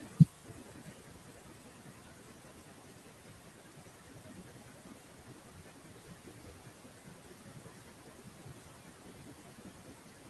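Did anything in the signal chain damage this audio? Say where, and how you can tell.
Yes. The damage comes from call processing, in the noise suppression stage. Noise suppressor artifacts run through the whole clip. The background sinks in the gaps and comes back under the speech. The room noise steps up by about 13 dB at around 6 s and still sits about 17 dB below the speech.

The speech is cut by the noise suppressor from start to finish. Soft consonants and word endings sound swallowed. Quiet stretches dip by as much as about 18 dB. The suppressor estimates which frequency bands hold steady noise and turns them down. Low-level speech energy falls into those bands and gets pulled down with the background. That is why the speech fades at its softest moments.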